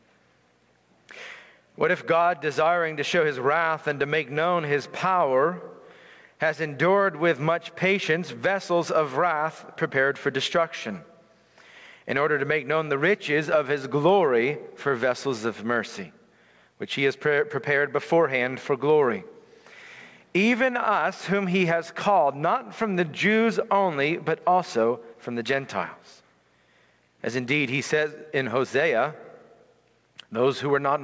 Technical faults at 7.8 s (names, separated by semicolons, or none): gain pumping